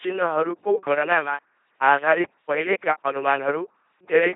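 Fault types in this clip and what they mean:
LPC-10 vocoder: The speech sounds buzzing and robotic, with nothing above 3.7 kHz. A low-rate vocoder like this, about 2.4 kbit/s, rebuilds it from a simple filter.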